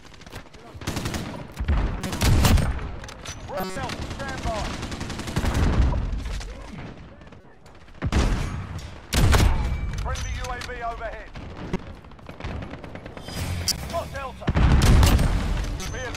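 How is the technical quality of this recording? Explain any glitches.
Technical quality takes a hit from six corrupt frames that got decoded anyway, at 2.01, 3.57, 7.41, 11.73, 13.68 and 15.80 s. Each lasts under a fifth of a second. Flipped bits in the compressed data meant the decoder misread gains or codes and pushed energy into the wrong frequencies, so you get short chirps or bursts of noise. Most are fairly loud, the one at 13.68 s especially, while 7.41 s is a faint blip.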